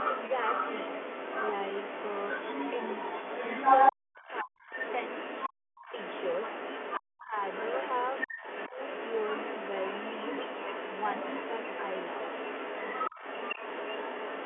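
The echo canceller likely failed to remove the far end's loudspeaker sound from the microphone, so the other side's voice leaks through from 0.0 to 5.49 s at roughly the same level as the talker, a second voice competing on equal terms within the narrow telephone band. During that overlap, from 3.92 to 4.71 s, speech is suppressed in double talk: the canceller, likely unable to tell its own talker from the echo, pulls everything down, and the talker drops by as much as about 40 dB, gapping out for about 400 ms. The same happens from 5.49 to 5.92 s, a shorter cut of about 200 ms.

From 5.82 s to the end, the other side's voice leaks through again, likely for the same reason, now roughly 5 dB below the talker. Double-talk suppression returns at 6.98 to 7.36 s with another deep drop of about 40 dB, then briefly around 8.7 s, where a dip of about 10 dB lasting roughly a tenth of a second softens the talker rather than silencing it.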